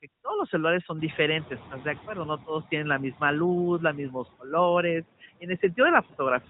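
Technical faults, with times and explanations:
Throughout, noise suppressor artifacts: The suppressor cuts the background by about 14 dB, working band by band on each frame. The room noise jumps by about 24 dB at around 1 s and then sits about 17 dB below the speech. Against that level the processing pumps audibly: the noise sinks in the pauses and swells back under each phrase.
6.08 to 6.13 s, lost AMR speech frame: A brief dip or warble breaks the speech here, lasting about 50 ms, which fits one dropped 20 ms frame plus the decoder's recovery. The narrowband AMR decoder received no valid data for that frame, so it repeated the last good pitch and vocal-tract parameters at reduced gain. That produces the short smeared, weakened stretch. The speech then returns weak or rough for a moment before the 4 kHz-limited codec output settles again.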